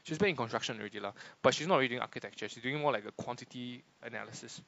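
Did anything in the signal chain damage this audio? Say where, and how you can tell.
No, none of the stages the signal passed through left any damage that can be heard in this speech recording.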